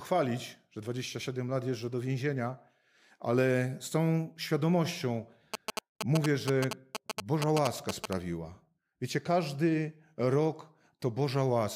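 From 5.54 s to 8.13 s, a nearby 2G phone is exchanging short signalling bursts with its network, and the audio circuitry picks up that radio energy and rectifies it into the signal. The result is GSM signalling bursts: a galloping dit-dit-dit of short buzzes pulsing at about 217 Hz, roughly as loud as the speech itself, so the interference sits right on top of the talker rather than in the background.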